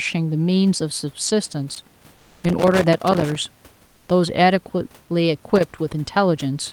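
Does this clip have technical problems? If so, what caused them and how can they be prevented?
Yes. A worn or dirty contact in the cable or connector path made and broke rapidly as it moved, chopping the signal and adding pops from any DC on the line. This loose connector crackle is heard as an irregular burst of scratching from 1.74 to 3.36 s, and again briefly from 5.56 to 5.77 s. Reseating, cleaning or replacing the connector and cable, and securing it against movement, prevents this.

From 3.87 to 4.07 s, about 200 ms, the background is swapped for comfort noise. The likely cause is discontinuous transmission, as in Opus DTX: the sender's voice detector judged the pause silent and stopped sending audio, so the receiver filled the gap with synthetic noise. The real background, about 39 dB below the loud parts and carrying the ordinary room noise, becomes a flat, featureless hiss that is about 4 dB quieter, then returns when sound resumes. 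Turning off DTX on the sending side, or lowering its voice-detection threshold, keeps the genuine background intact.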